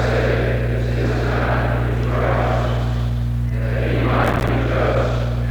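At 4.24 to 4.49 s there's processor overload crackle: buffers of around 5 ms keep missing their deadlines, about twenty dropping to silence, giving a gritty tearing burst.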